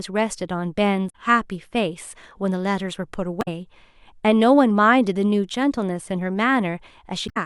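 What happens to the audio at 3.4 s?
Damaged data in the compressed stream hits this speech at 3.38 s and runs to 3.48 s, roughly a tenth of a second. Bytes in that stretch of the encoded file are corrupt, so the decoder misreads the affected frames, loses its place in the bitstream and hunts for the next valid frame header before resuming. The result is a brief glitch in place of the speech there.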